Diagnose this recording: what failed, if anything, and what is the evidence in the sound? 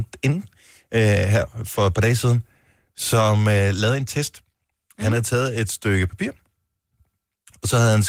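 Nothing failed in this recording, and there is no evidence of any fault in the sound.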